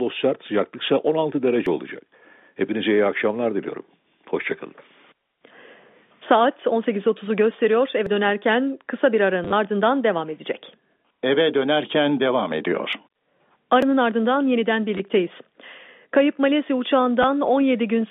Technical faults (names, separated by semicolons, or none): dropped buffer (overrun); packet loss with last packet repeated